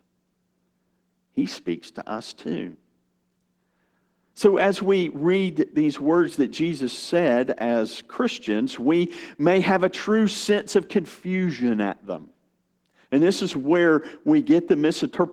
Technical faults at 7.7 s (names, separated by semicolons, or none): Opus voice compression